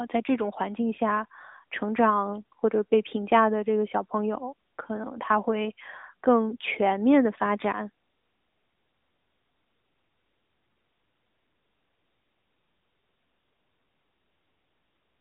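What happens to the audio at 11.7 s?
At 11.7 s, as throughout, the speech carries AMR narrowband mobile codec damage: nothing above 3.8 kHz, plus a buzzy, synthetic texture that plain band-limiting lacks, fitting a mid-rate AMR mode.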